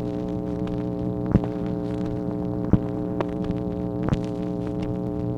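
From 1.06 to 5.07 s, a click recurs about once per second, likely clock drift buffer slips: roughly 400 ppm mismatch dropping or repeating around 15 samples. Each shows as a thin vertical broadband line on a spectrogram.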